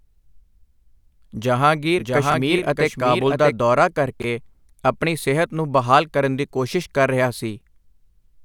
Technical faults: doubled audio track; chunks out of order

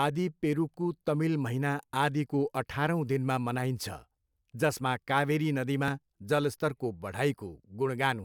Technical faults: lost LE Audio frames

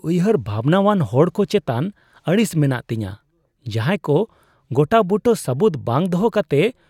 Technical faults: none

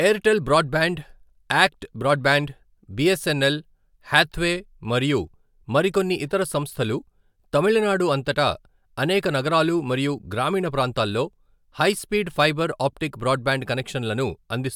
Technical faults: none

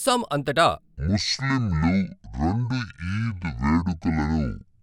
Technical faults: section at the wrong speed

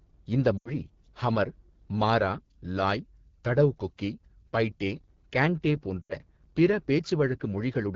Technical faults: AMR wideband (HD Voice) codec; lost AMR speech frames

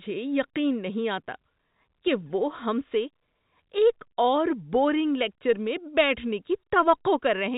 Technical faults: none

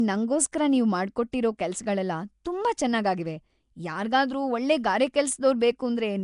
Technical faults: Nellymoser compression; pre-echo

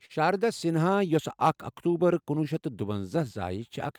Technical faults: clock drift between sender and receiver; short stall from a late packet; repeated timing corrections

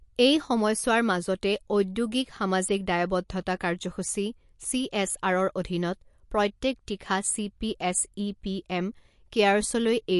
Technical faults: MP3 compression

